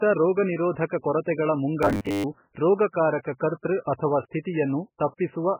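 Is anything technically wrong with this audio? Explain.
Yes. Throughout, the speech sounds dull, watery and swirly. This is likely heavy MP3 compression at a very low bitrate, perhaps around 8 kbps, zeroing weak frequency lines.

From 1.83 to 2.24 s, the speech becomes a rigid metallic buzz at 100 Hz. This is likely robotic sound from repeated short buffers, with roughly 10 ms chunks replaying over most of that stretch.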